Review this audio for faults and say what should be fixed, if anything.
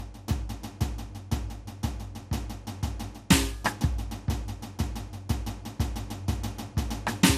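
Generation loss runs through the whole music clip. Nothing is heard above 15.9 kHz, and the sound is swirly, hollow and smeared. Attacks are more blurred than one encode at this quality would leave them. The likely cause is repeated lossy re-encoding, around five passes, in a form that fits MP2 at 96 kbit/s. Each pass quantises again on a shifted frame grid, so noise and spectral holes pile up.

To prevent it, keep a lossless master and make a single lossy encode from it at the end.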